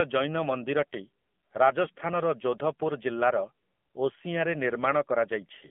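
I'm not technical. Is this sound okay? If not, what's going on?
No. The call went through the AMR narrowband mobile codec, the squeezed speech format used by older mobile phone networks. It rebuilds the voice from a simplified model and throws away everything above about 3.4 kHz, and here the squeeze is plainly audible. The speech sounds muffled and phone-like, missing its crisp upper detail, with a buzzy, slightly artificial edge to the voice throughout.

Between 1.86 and 2.02 seconds there are AMR bit errors. For that brief stretch a weak connection scrambled part of the data in a short burst of frames, though enough got through for the phone to keep playing it. The voice stays at roughly the same pitch and loudness, but for that moment it turns rough, scratchy and gargly before clearing again.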